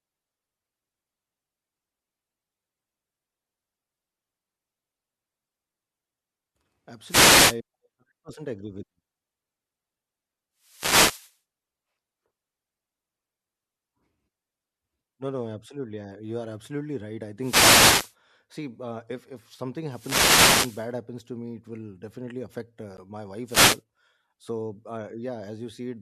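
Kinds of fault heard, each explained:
Wireless microphone noise hit: the radio link fades out briefly, so receiver hiss swells into swishes of static, five times here, from about 7.06 to 23.82 s.
Corrupt frame decoded: damaged compressed data played anyway, giving a fairly quiet blip of misplaced energy lasting a couple of frames, right after "it will definitely affect".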